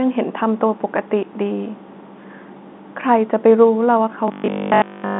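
Speech heard over a G.711 telephone line, with nothing above 3.8 kHz. From 4.28 s to the end at 5.19 s it turns to robotic sound from repeated short buffers: a rigid 50 Hz metallic buzz, likely from 20 ms of audio repeated in place of nearly all the real signal. On a spectrogram this appears as evenly spaced 50 Hz harmonic lines, and on the waveform as an identical 20 ms cycle.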